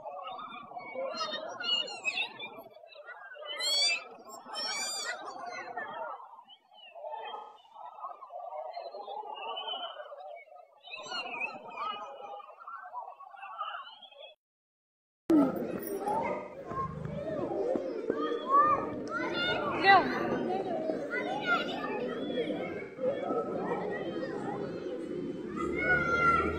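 The audio has AAC frame loss with concealment, four times: 1.76–1.82 s, 7.35–7.73 s, 16.31–16.67 s and 22.84–23.03 s. The first dropout is short, about 43 ms, consistent with a single lost frame, and comes across as a brief smeared, noisy patch. The gaps at 7.35 s and 16.31 s run about 213 ms each, fitting a run of five frames. The one at 22.84 s is about 128 ms, fitting three. In each case the decoder fills the hole by re-using the last good spectrum.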